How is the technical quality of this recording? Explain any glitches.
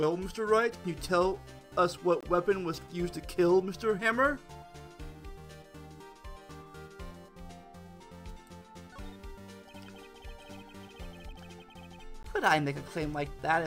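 The recording has two brief dropouts, both gaps at a join of encoded pieces. At 2.21 to 2.23 s (22.8 ms) and at 12.23 s (16 ms), ten seconds apart, separately encoded segments were joined with their start delays and end padding left in. Each leaves a short silence with smeared edges before the sound resumes where it stopped.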